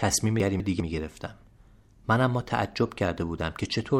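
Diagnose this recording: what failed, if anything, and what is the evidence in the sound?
A garbled stretch from 0.4 to 0.8 s: chunks out of order at the buffer stage, one 200 ms chunk played a chunk late, leaving hard joins.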